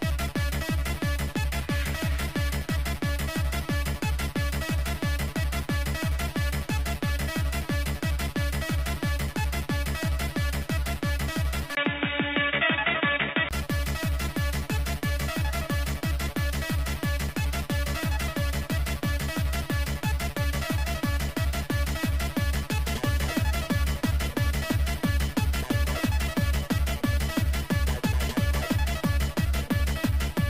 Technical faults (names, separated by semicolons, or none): input switched to a poorer device